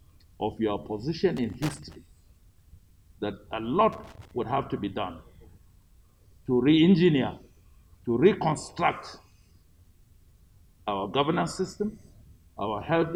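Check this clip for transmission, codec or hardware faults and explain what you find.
Two bursts of loose connector crackle are present. The first runs from 1.37 to 1.96 s, the second from 3.93 to 4.31 s. Each is an irregular spell of scratching and crackle laid over the sound. A worn or dirty contact in the signal path is shifting. It rapidly makes and breaks the connection, chopping the audio into fragments. Any DC on the line turns each break into a pop, giving the rough, uneven texture.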